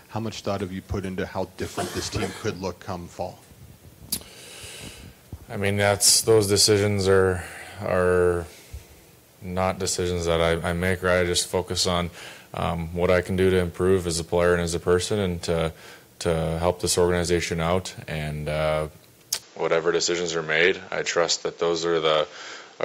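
From 19.42 s to the end, the sound narrows with nothing above 7.6 kHz and a new noise floor appears, likely an input switched to a poorer device.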